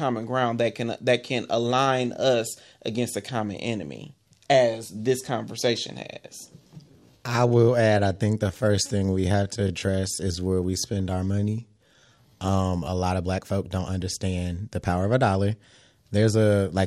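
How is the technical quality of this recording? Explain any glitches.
The recording has one clear glitch: a time-stretched section from 6.55 to 13.03 s, starting just after "as this conversation has" and ending before "of black folk don't". The pace abruptly drops to about 0.72 times normal speed while pitch stays put, so the speech drags. This is likely software lengthening the audio by repeating short overlapping pieces. On a spectrogram, harmonics hold their spacing while syllables widen; the waveform shows stretched transients.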